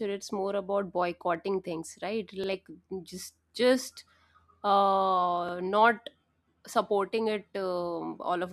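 At 2.44 to 2.49 s, right after "about boycotting things right", and again at 5.49 to 5.54 s, just before "not supporting it", the speech hitches with a brief stutter: overlapping chunks. Each new 3-second block begins before the previous one finished, so 50 ms plays twice at the join. On a waveform, a short stretch visibly repeats with a discontinuity at the seam. A spectrogram shows a thin vertical click line and a duplicated slice of harmonics.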